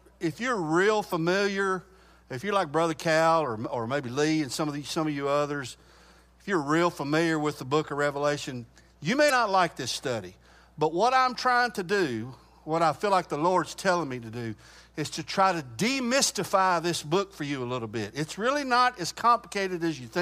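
At 1.09–1.13 s and 9.26–9.31 s, damaged data in a compressed stream makes the decoder lose frame sync, giving a brief chirp, squawk, click or short hole.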